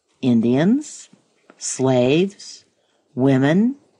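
A click recurs every 0.6 s from 0.26 to 3.86 s, which is likely clock drift buffer slips: mismatched clocks, a few hundred ppm apart, drop or repeat a handful of samples.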